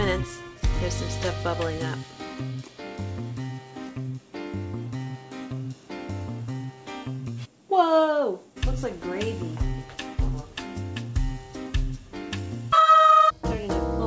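No faults found; the audio has come through a call path whose band stops at 8 kHz, which fits a wideband codec such as G.722.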